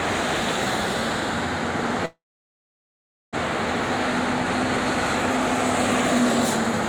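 At 2.05 s the audio hits a call audio freeze that runs to 3.35 s. The last bit of sound stretches into a short fading buzz, then about 1.1 s of near silence, so roughly 1.3 s is filled in. The likely cause is packets stalling in transit until the jitter buffer ran dry. When the sound picks up again it carries on right where it stopped, so nothing's lost; everything after just lands about 1.3 s late.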